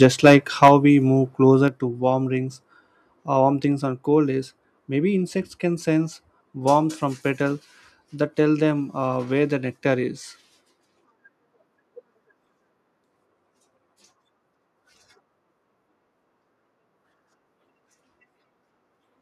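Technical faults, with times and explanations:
0.02–0.36 s and 0.62–0.74 s, microphone overload: the loudest peaks in both stretches are flattened, giving a harsh, crackly edge just before "we move closer to". The signal runs about 7 dB past full scale, with a few percent of samples squared off in the first stretch and several percent in the second. This is likely because the microphone input was set too high, so the converter hit its ceiling and cut off the waveform tops.
0.68 s, 1.68 s and 3.72 s, microphone volume stepped down: the level drops abruptly three times, by about 4 dB, about 4 dB and about 2 dB. The second drop falls between "we move closer" and "to warm rings", and the third between "or warm" and "on cold days maybe". Speech and background fall together in one step rather than fading, likely because the call software found the microphone too loud or clipping and cut the device's input gain.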